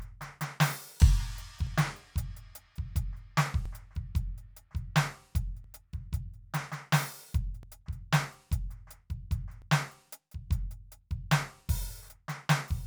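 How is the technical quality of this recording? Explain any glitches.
The music has small skips at regular points. Audio missing between chunks occurs at 1.67, 3.66, 5.64, 7.63 and 9.62 s. The likely cause is processing in 2-second blocks, losing about 10 ms at each handover. The sides join without silence. Each gap sounds like a tiny skip.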